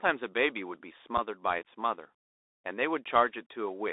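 A speech recording that sounds thin, muffled above about 3.7 kHz and below 300 Hz, with scratchy sibilants and a granular hiss: the Bluetooth CVSD headset codec, consistent with a 64 kbps one-bit link whose adaptive step lags fast changes. At 1.17 s a brief hole of about 7.5 ms cuts in with abrupt edges, which fits a couple of dropped radio packets: unconcealed Bluetooth headset packet loss.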